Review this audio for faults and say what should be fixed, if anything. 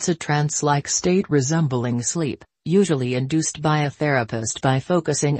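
From 0.89 to 1.83 s the sound slows by about 6% and drops 108 cents, roughly a semitone flat, then snaps back. That's likely a drift correction step: clock-matching software changed the playback rate in one jump to rebalance its buffer. To prevent it, have the resampler ease the rate in tiny, gradual increments rather than stepping it.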